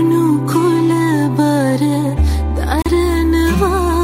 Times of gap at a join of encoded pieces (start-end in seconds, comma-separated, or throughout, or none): 2.82-2.86